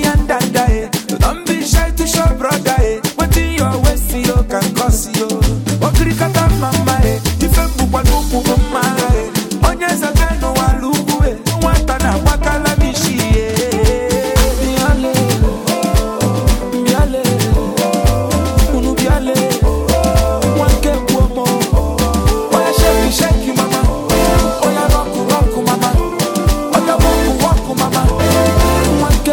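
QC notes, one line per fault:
No audible faults detected in this clip.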